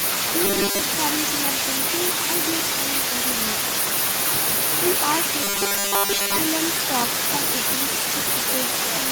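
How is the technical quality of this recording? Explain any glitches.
The quality is poor, with two faults in this speech. Echo with no canceller runs throughout: every phrase returns about 8 dB quieter roughly 0.4 s later, a far-end loudspeaker being picked up again, visible as quieter delayed copies of each waveform burst. From 0.45 to 0.80 s and from 5.44 to 6.39 s, robotic sound from repeated short buffers appears. The audio becomes a rigid metallic 200 Hz buzz, likely from 5 ms chunks repeated while most real audio is skipped, seen as evenly spaced horizontal harmonics on a spectrogram.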